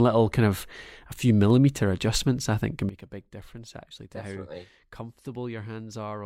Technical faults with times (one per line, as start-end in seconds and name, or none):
2.89-6.25 sudden gain jump